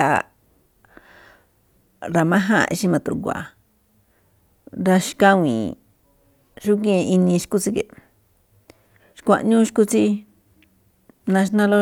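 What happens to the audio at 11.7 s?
At 11.7 s the speech carries on intact, with no dropout, click, distortion or other fault at that moment.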